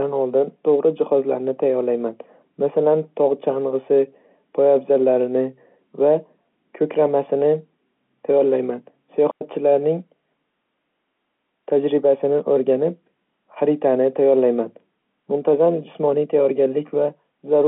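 At 9.31 s the speech drops into a clean hole of near silence lasting about 100 ms, until 9.41 s, with no crackle or noise burst on either side. That is a digital wireless dropout: the radio link between transmitter and receiver lost too much data to rebuild the audio, so the receiver muted with a very short fade. The narrow telephone band of the G.711 line, roughly 200 Hz to 3.4 kHz, carries on either side of the gap.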